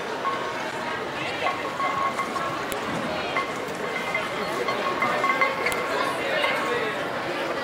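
File header played as audio produces sharp, loud clicks at 2.72 s and 5.72 s, exactly 3 s apart. Pieces roughly 3 s long were joined with their headers left in. The header bytes play back as a short, loud burst of samples, a snap that cuts through whatever the sound is doing.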